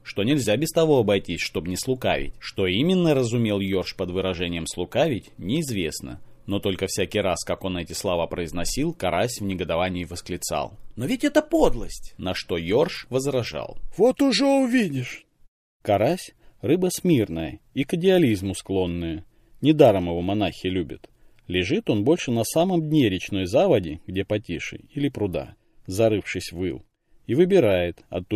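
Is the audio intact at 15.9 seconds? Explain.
Yes, the audio at 15.9 seconds is intact, with no dropout, glitch, or other fault at that moment.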